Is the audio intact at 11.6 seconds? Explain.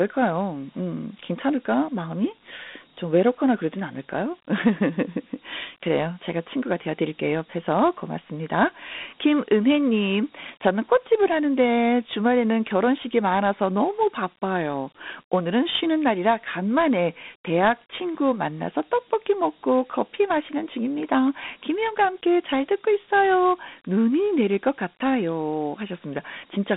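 No. Dialogic VOX ADPCM affects 11.6 s, as it does the whole clip. The 4-bit ADPCM coding at 32 kbps, which fits an 8,000-sample rate, leaves a 200 Hz to 3.7 kHz telephone band with nothing above 3.8 kHz, and plainly audible gritty hiss trailing the speech.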